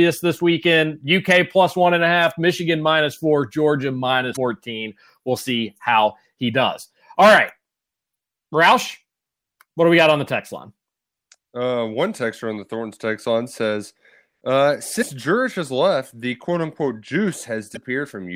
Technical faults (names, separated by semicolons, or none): damaged data in a compressed stream